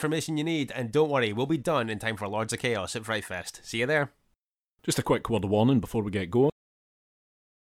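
At 6.50 s, right after "warning before we get", the speech has a cut-off end: the final buffers were never written, so audio halts mid-sound into digital silence for the last 1.2 s. Unlike a fade-out or natural pause, there is no decay or room tail.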